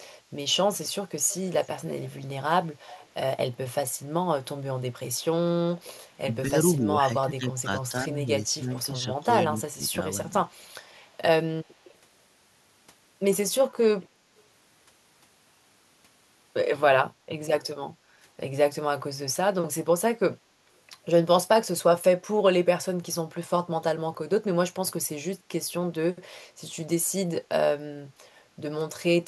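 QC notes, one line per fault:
1.27–2.1 s and 2.87–3.07 s, echo leak: a faint delayed copy of the speech trails it by 228 ms, about 20 dB below the direct sound. This is likely a far-end loudspeaker echo that the canceller failed to remove, so it comes back behind the talker.
5.68–5.73 s and 6.43–10.47 s, speech suppressed in double talk: the speech dips briefly by around 10 dB, then through the longer stretch it drops by up to roughly 15 dB for about a second and a half in total. This likely comes from an echo canceller that, with both sides talking, could not tell the near talker from echo and attenuated both.
14.37–14.41 s, echo leak: a very brief residual echo slips through at the same 228 ms delay, but far weaker, around 40 dB under the speech. It is a short leftover that likely escaped the canceller.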